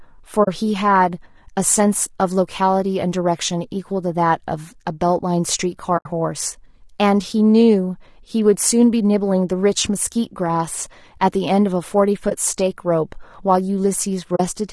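From the start, the speech sounds rough and grainy. Noise fills the gaps between harmonics, and the top band sounds thin and synthetic. This is likely low-delay AAC compression, AAC-ELD at around 32 kbps. Its short frames resolve pitch poorly and starve the bits.

At 0.43 to 0.48 s, the sound fades to a soft hole. The same happens at 5.97 to 6.06 s, the longest gap at 80 ms, then a brief dip at 12.29 to 12.32 s, and another soft hole at 14.35 to 14.40 s. These are AAC frame losses with muting. The decoder zeroed the missing frames, and overlapping windows smooth the edges.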